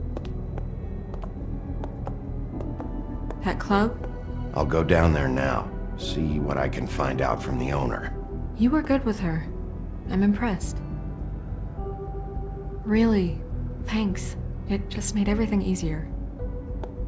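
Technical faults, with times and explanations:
No technical faults, with times or otherwise, can be heard in this clip.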